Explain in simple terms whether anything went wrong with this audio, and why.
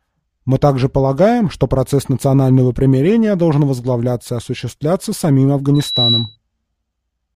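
A piercing whistle near 3.9 kHz swells up over about a third of a second from 5.74 to 6.36 s: loudspeaker feedback squeal, from the microphone re-amplifying its own loudspeaker.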